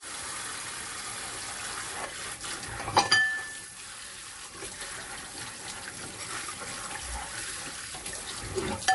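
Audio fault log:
throughout MP3 compression: treble stops dead at 11.3 kHz and weak frequency lines flicker, giving plainly audible swirl, likely from an encoder starved near 48 kbps.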